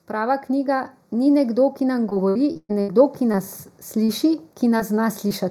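Speech that sounds hollow and phasey from start to finish, with the brightness thinned out in the upper range. This is channel delay (comb filtering): one channel trails the other by a fraction of a millisecond, and when the two are summed to mono they cancel at evenly spaced frequencies, with the first notch around 3 kHz. The level also swells steadily from 0.07 s to 4.29 s, rising by about 7 dB, with the background coming up along with the voice. That gradual climb is automatic gain rising, where the gain control judged the input too quiet and kept raising its gain. Between 2.09 s and 2.90 s the sound turns choppy, with pieces dropping out. This is repeated packet loss (robotic sound): five gaps in under a second, the longest about 0.12 s, roughly 300 ms missing in all, each patched by stretching the last sound before the next hole arrives. Brief smears or wobbles follow at 3.32–3.37 s, 4.04–4.10 s, 4.78–4.81 s and 5.28–5.32 s. 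Each is a short concealed packet loss of about 20 to 40 ms that the decoder filled by continuing the preceding sound before blending back into the real audio.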